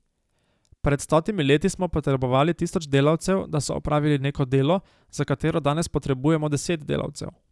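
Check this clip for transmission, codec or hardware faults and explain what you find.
Nothing in the speech signal points to a transmission, codec or hardware problem; the recording is free of faults.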